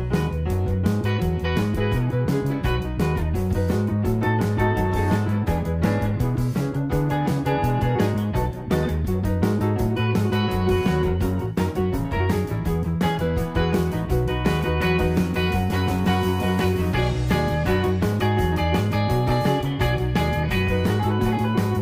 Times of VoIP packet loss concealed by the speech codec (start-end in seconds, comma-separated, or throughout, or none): none